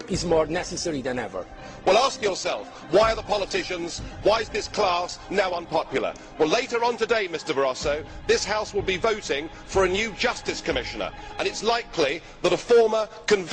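From 0 to 6.0 s the audio shows an adaptive stream starting at a low bitrate: the player began on a lean version to start quickly, then switched up once it had gauged the connection. Until 6.0 s nothing sounds above about 10.7 kHz, the treble is dull and coding artefacts are prominent, which fits a low Opus bitrate near 16 kbit/s. On a spectrogram the band stops flat at 10.7 kHz, then widens abruptly at 6.0 s with no gap in the waveform.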